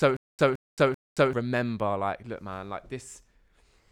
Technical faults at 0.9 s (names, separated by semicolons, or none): stutter with silent gaps